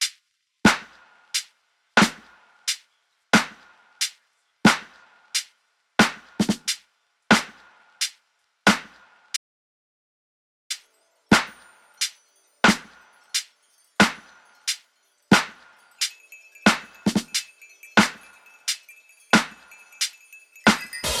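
At 9.37 s the sound is cut off mid-flow by an audio dropout to silence, and it resumes abruptly at 10.70 s, so about 1.34 s of material is simply missing. The gap is silent, with no room tone or hiss underneath, which sets it apart from a noise gate closing or a level dip, where some background would remain. The input feed was likely lost while recording carried on writing silence.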